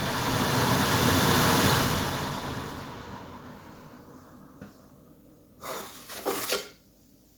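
Nothing technical is wrong with this recording of sounds, so there are no faults to point to anywhere in it.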